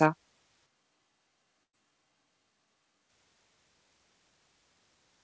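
From 0.67 s to 3.09 s the speech was most likely captured by a more distant microphone, meaning the close microphone's feed dropped out or was not used. The sound becomes roomy and hollow, with thinner bass and a level about 5 dB lower. Background noise rises to roughly 30 dB below the speech. Both the switch to the distant microphone and the return at 3.09 s are abrupt, with no fade.

During that stretch, a burst of packet loss occurs from 1.64 s to 1.75 s. A run of packets never arrived in time, so the receiver concealed the gap by extending the last sound for 92 ms and fading it away. The result is a brief held buzz or dying hiss, after which the audio jumps ahead with 100 ms missing. Throughout the clip, the call codec's band limit leaves nothing above 8 kHz.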